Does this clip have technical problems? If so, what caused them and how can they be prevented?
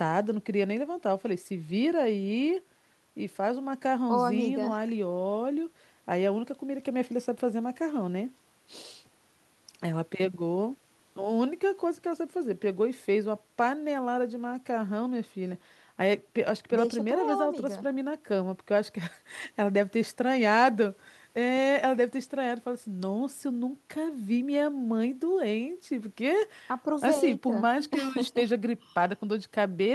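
No, no technical faults can be heard in this speech clip. There is nothing here to trace to a cause or to prevent.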